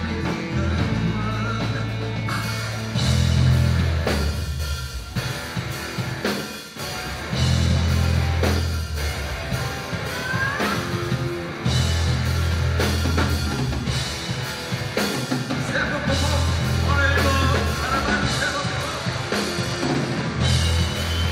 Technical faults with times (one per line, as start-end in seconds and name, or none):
18.03-20.62 Bluetooth SBC bit pool drop